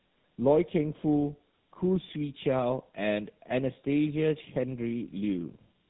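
Throughout, the speech shows tandem speech coding: it was decoded and re-encoded across links, which fits an AMR narrowband leg passing through G.711 into GSM full rate. Each coder degrades the previous coder's output, leaving rough, warbly, muffled speech with nothing above 3.8 kHz.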